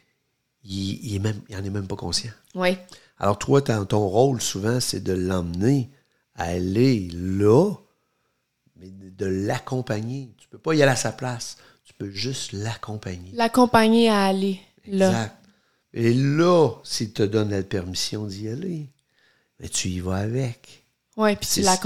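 No technical faults are audible.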